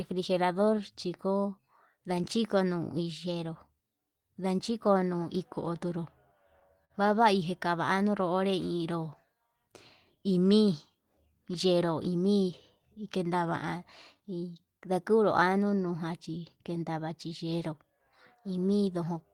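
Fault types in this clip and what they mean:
Clock drift between sender and receiver: The sending end's clock runs a few percent slow against the receiver's, so the jitter buffer keeps draining. The receiver has to pad things out by repeating little slivers of audio, and once the buffer simply runs dry. Across the whole speech clip you get that slightly uneven, slowed-down feel, with small hiccups at irregular spacing instead of a clean, steady pace.
Repeated timing corrections: These are the receiver's patch-ups for that slow clock. All of them go the same way, stretching by repeating short bits, so the speech plays at about 97% speed. The first run goes from 0.14 to 5.90 s and adds roughly a fifth of a second. The second, from 7.92 to 19.10 s, adds around 0.4 s. Each edit is tiny, so you hear a wobbly, dragging tempo more than obvious glitches.
Short stall from a late packet: Around 6.85 to 6.92 s a packet showed up late and the buffer ran empty. 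The receiver held the last sound for 49 ms until the packet arrived, then carried on from the same place, so nothing is lost. You just hear one sound hang a touch too long with a faint buzzy or dipped quality, and the delay grows by those 49 ms from there on.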